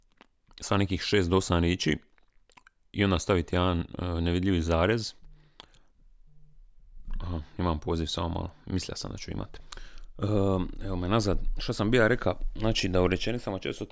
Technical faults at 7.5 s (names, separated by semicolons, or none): none